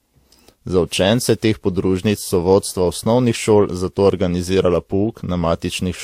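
From start to end the speech shows layered compression damage, with nothing above 16.1 kHz and two different kinds of coding artefact heard together, which is likely transcoding between lossy codecs. The pattern points to a low-rate Vorbis encode, around 57 kbit/s, later re-encoded as WMA at around 96 kbit/s. The higher second rate cannot restore what the first pass removed. It spends bits on those earlier artefacts, adds its own, and keeps the band limit.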